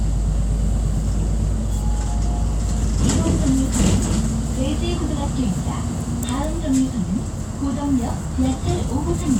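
A short recording of everyday sounds, and there's nothing technically wrong to point to anywhere in it.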